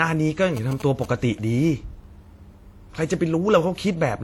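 Throughout the speech, nothing is heard above 18.4 kHz, and two different kinds of coding artefact are layered together. This is likely transcoding between lossy codecs, consistent with a WMA encode at around 48 kbit/s re-encoded to HE-AAC at around 40 kbit/s, each codec adding its own damage.

From 0.57 to 1.06 s, a galloping dit-dit-dit of short buzzes sits about 15 dB below the speech. These are GSM signalling bursts: a nearby 2G phone transmitting in short groups, which the audio circuit rectifies into a buzz repeating at 216.7 Hz.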